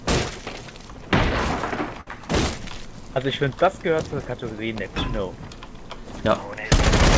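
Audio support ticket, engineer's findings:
Held, fading continuation of the last sound at 2.01–2.07 s, then audio resumes with about 60 ms skipped. Burst of packet loss: receiver concealment extended the final good audio for 55 ms while turning it down. Band-limited to 8 kHz, pointing to a G.722 call codec.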